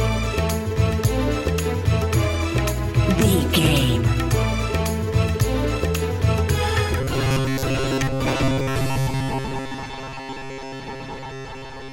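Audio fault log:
7.01–11.93 s, robotic sound from repeated short buffers: from 7.01 s to the end, the sound turns into a rigid, metallic buzz that loosely follows the original contour. The buzz sits at 134 Hz, which fits a fragment of about 7.5 ms being looped. The likely cause is audio arriving too seldom, so playback repeats the last short buffer to fill the gap. Roughly two-thirds or more of this stretch is repeated material, with the actual audio skipped.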